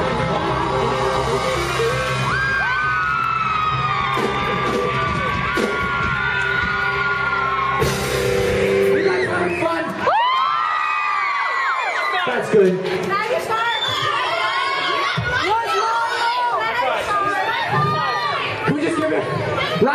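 Four isolated sharp clicks sound at 3.24, 9.5, 13.97 and 19.02 s, each likely from dropped samples, a fraction of a millisecond missing, making the waveform jump abruptly.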